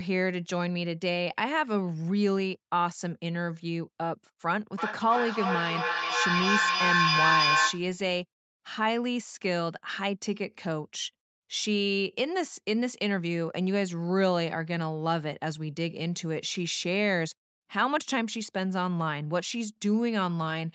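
From 4.78 to 7.92 s a shrill tone near 1 kHz swells and pulses about every third of a second, peaking about 4 dB above the speech. This is feedback howl: two call devices in one room re-amplify each other on every loop.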